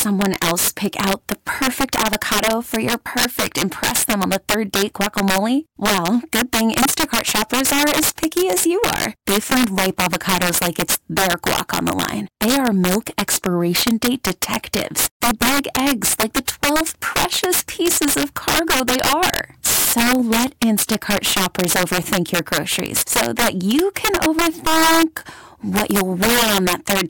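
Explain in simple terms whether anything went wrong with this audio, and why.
Yes, integer overflow runs throughout this speech: on loud peaks the level wraps to the opposite extreme, giving harsh cracks far sharper than ordinary clipping's flattened distortion.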